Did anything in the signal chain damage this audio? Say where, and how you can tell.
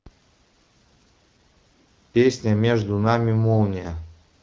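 No, nothing in the signal chain damaged this speech.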